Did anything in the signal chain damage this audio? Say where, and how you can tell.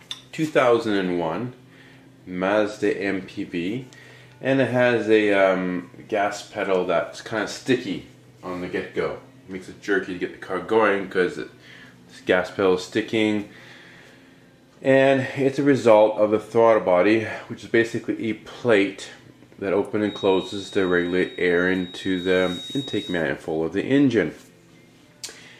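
Yes: a feedback whistle, a 3.8 kHz tone about 20 dB below the sound, sits from 20.0 to 23.27 s, likely from an acoustic loudspeaker-to-microphone loop held right at the feedback threshold.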